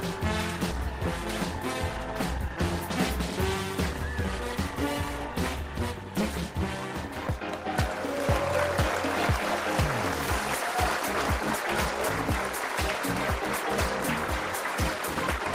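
No technical faults can be heard anywhere in the recording.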